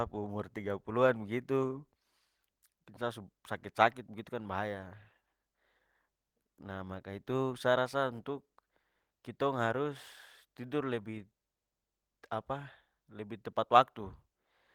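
No technical faults are audible.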